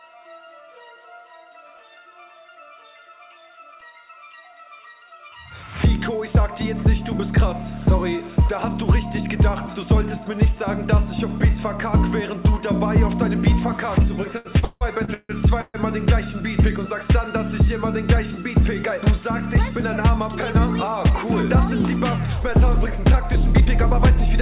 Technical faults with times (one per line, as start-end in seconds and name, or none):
14.38-15.76 repeated stalls (stutter)
17.54-18.55 jitter buffer speed-up
18.98-19.58 jitter buffer speed-up
22.77-24.27 jitter buffer speed-up